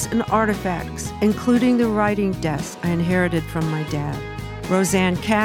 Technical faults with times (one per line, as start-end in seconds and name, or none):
none